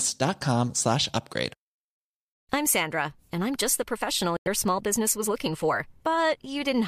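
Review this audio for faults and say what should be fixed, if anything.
Corrupt frame muted, 4.37 to 4.47 s: flipped bits in the compressed stream left several consecutive frames undecodable. The decoder rejected them and the player put silence in their place. The speech stops abruptly for about 0.11 s and then resumes on schedule, with no shift in timing. That gap length fits roughly five frames of about 20 ms each. Protecting the stream with error detection and retransmission, or applying packet-loss concealment rather than hard muting, would prevent it.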